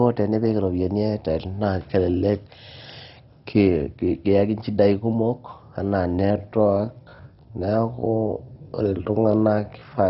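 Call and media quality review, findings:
Dull, band-limited sound throughout, nothing above 5.6 kHz, heavy gurgling, granular texture with upper bands flickering. Likely MP2 compression at a starved rate, roughly 32 kbps. Too few bits, so top sub-bands drop out and the rest quantise coarsely.

Pace drops abruptly from 5.97 s to the end, right after "kiyaki inchidai kumok". Pitch holds at about 0.68x speed. Likely a time-stretched section, with the stretcher repeating short chunks to pad the length.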